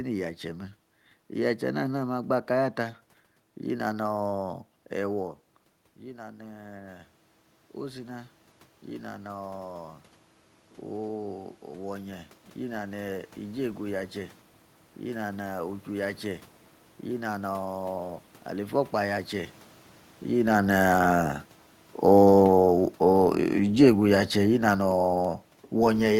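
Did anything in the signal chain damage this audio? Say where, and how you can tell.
Yes. Automatic gain rising in the call-processing stage affects 5.19 to 18.82 s. Around 5 s the talker moves away and the input level drops by about 14 dB. The automatic gain control then slowly raises its gain by about 13 dB over roughly 13.6 s, and the room noise climbs right along with the voice. On a waveform, the envelope shrinks abruptly and then creeps back up. On a spectrogram, the background noise floor gradually brightens across the whole band, even between phrases.

Automatic gain falling, from the same call-processing stage, runs from 20.34 s to the end of the clip. Just after 20 s the talker moves, and the gain control pulls its gain back down gradually. The voice and the room noise sink together rather than the voice alone. The waveform shows a tall envelope that tapers steadily, and the spectrogram shows the noise floor darkening in step with the voice. 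A talker's own movement wouldn't change the background level like that.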